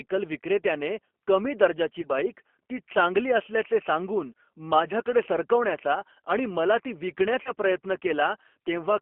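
The G.729 codec shapes the whole clip. It is a low-rate speech coder that rebuilds each frame from a vocal tract filter, a pitch predictor and a few pulses. The damage is plainly audible. The speech sounds rough and slightly synthetic, which fits an 8 kbit/s coder. The band runs only from about 250 Hz to 3.4 kHz, so it sounds thin and telephone-like.

VoIP packet loss concealment appears at 2.01 s, just after "विक्रेत्याने कमी दर्जाची". About 20 ms of audio went missing, which fits a single lost packet. The decoder filled the gap by extending its last pitch and filter with falling gain. The result is a brief stretched, fading sound. Each frame builds on the one before, so the speech stays weak until about 2.09 s.

The same packet loss concealment recurs at 7.42 s, after "सरकवण्याचा आणि मला ती". This gap is longer, about 40 ms, which points to two packets in a row. The stretched, fading sound lasts longer here. 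The speech stays distorted until about 7.52 s.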